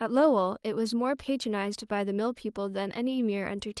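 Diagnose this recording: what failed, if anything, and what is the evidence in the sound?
Nothing failed: the speech has gone through a WebRTC call path whose codec is working as intended, with the top end stopping at 12 kHz, which fits Opus at 40 kbps, and no stage from capture to playback leaves an audible defect.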